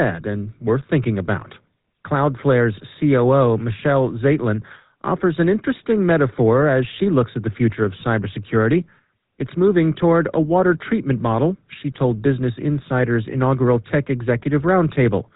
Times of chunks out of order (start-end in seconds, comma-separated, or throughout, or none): none